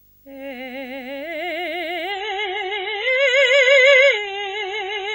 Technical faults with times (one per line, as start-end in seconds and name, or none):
0.00-5.15 video or display buzz
2.12-5.15 adaptive stream at a lower bitrate